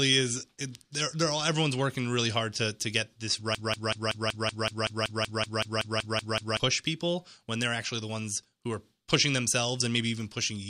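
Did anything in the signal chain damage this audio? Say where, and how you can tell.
Yes. From 3.55 to 6.60 s the speech turns into a broken-record loop: a 189 ms fragment repeats exactly 16 times back to back, and the speech due in that span is lost. Identical repeats rule out echo or stutter; the likely cause is a stalled buffer or decoder replaying its last fragment.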